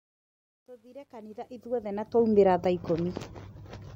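From the start to 2.4 s, the speech fades in with truncation distortion: the fade keeps only 11 bits, undithered, so the quietest part, up to 1.18 s, turns gritty. Unlike dropouts, the grit tracks the level and clears as the fade rises.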